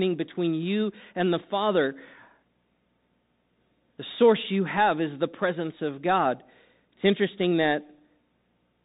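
Bluetooth CVSD headset codec damage runs throughout: one-bit delta coding caps the band near 3.8 kHz, leaving s sounds scratchy over a granular hiss.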